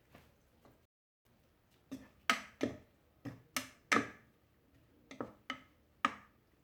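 At 0.85 s the sound drops to silence for about 0.4 s, then picks up exactly where it stopped: a rebuffering stall, the player starved of downloaded audio.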